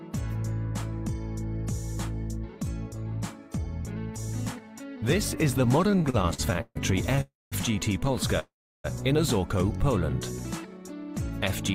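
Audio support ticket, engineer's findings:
Repeated stalls (stutter), 5.81–6.77 s: 13 short gaps totalling 341 ms, longest 139 ms, about 36% of that span concealed, nothing lost. Jitter buffer underrunning repeatedly as packets arrive late or too slowly; receiver extends the last sound each time, so the audio drags.

Call audio freeze, 7.21–7.54 s (307 ms) and 8.40–8.86 s (446 ms): last sound continued, then silence for about 200 ms and 340 ms. Audio resumes where it stopped, nothing missing, delay increased by each gap. Likely packets held in transit, emptying the jitter buffer.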